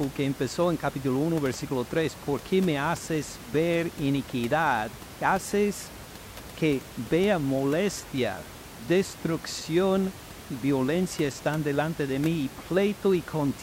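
The speech signal shows no technical faults, with only the room's own background noise audible at about 17 dB below the speech.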